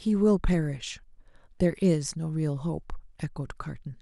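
Nothing technically wrong turns up anywhere in this bit of speech, so there's simply no fault here to point to.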